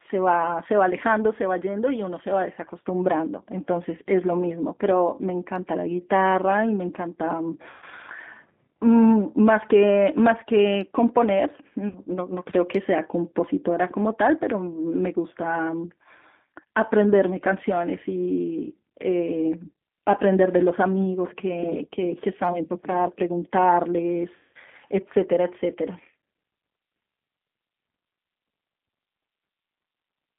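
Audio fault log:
Throughout: G.729 codec. The speech passes through an 8 kbit/s G.729A encoder, which keeps only a vocal tract filter, a pitch predictor and a sparse set of pulses per frame, so the fine texture is rebuilt rather than carried. The result is plainly audible: a rough, slightly synthetic edge on the voice, and a narrow line band of about 150 Hz to 3.6 kHz with nothing reaching up to 4 kHz.
7.70 to 7.84 s, 11.89 to 12.00 s, 24.37 to 24.57 s: VoIP packet loss concealed by the speech codec. Runs of lost packets, about 120 ms, 60 ms and 180 ms long, are filled by the decoder repeating its last pitch and filter at falling gain. That smears the speech into a buzzy tone or coloured noise that fades. Because each frame builds on the previous one, the voice stays thin and distorted a little past each gap. The longest dropout is near 24.4 s.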